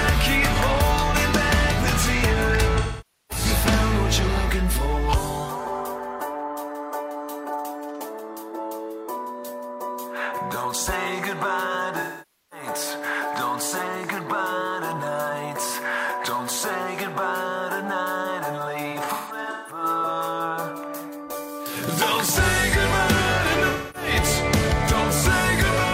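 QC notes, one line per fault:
2.78–3.45 s: AAC frame loss with concealment. About 512 ms of audio is missing, consistent with a dozen consecutive frames, and the decoder fills the gap from the last good spectrum, producing a smeared, noisy patch.
12.00–12.66 s: AAC frame loss with concealment. Another 512 ms gap, likewise consistent with a dozen frames, is filled by reused spectral content, so the sound turns smeared and phasey before normal decoding resumes.
18.91–19.83 s: AAC frame loss with concealment. Around 470 ms of loss is scattered across 768 ms, with the longest run about 150 ms, giving intermittent noisy, smeared patches rather than one continuous dropout.
23.69–24.10 s: AAC frame loss with concealment. A 256 ms gap, fitting about six lost frames, is covered by concealment, heard as a brief smeared, noisy stretch.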